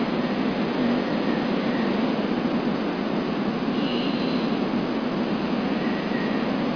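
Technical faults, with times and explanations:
Nothing technical stands out here; the speech comes across steady and intact the whole way, with no dropouts, glitches or other technical trouble to point to.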